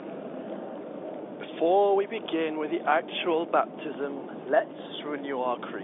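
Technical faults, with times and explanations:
Nothing in the clip amounts to a technical fault. The speech carries the narrow band of G.711 telephone coding, with the line passing roughly 300 Hz to 3.6 kHz and nothing heard above 3.8 kHz.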